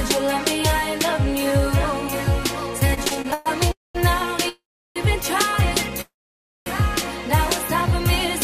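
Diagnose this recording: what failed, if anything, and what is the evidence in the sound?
Repeated stalls (stutter) sit at the network jitter buffer. From 2.87 to 3.48 s the music halts nine times, the longest break about 119 ms. Roughly 263 ms is filled in, nearly half that span. Packets arrived too slowly, so playback kept running dry and stretching.

Three call audio freezes follow, at 3.72 to 3.97 s, 4.49 to 4.98 s and 6.01 to 6.68 s. Each holds the last sound briefly, then fades to silence for 180, 360 and 570 ms. The music resumes where it stopped. The likely cause is packets delayed in transit, emptying the jitter buffer.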